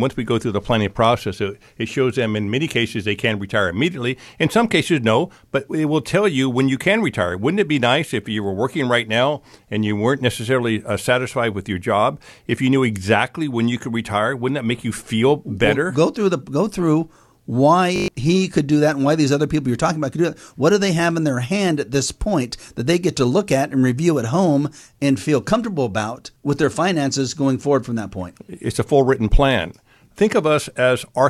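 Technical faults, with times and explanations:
17.96–18.08 s, system hang loop: a 20 ms piece of speech repeats six times, giving a brief 50 Hz buzz. The system stalled while the hardware kept replaying the same short ring buffer, and about a tenth of a second of audio is lost.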